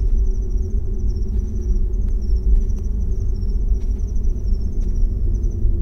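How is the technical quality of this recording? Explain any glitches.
One defect stands out: CD scratch ticks, five of them between 2.09 and 3.02 s. A scratch ruins more data per disc revolution than error correction can rebuild, so the player patches each gap. Each patch is a short tick, the longest around a millisecond. The ticks repeat at a steady rate. On a spectrogram they appear as thin, evenly spaced vertical lines. On the waveform they are tiny notches or spikes.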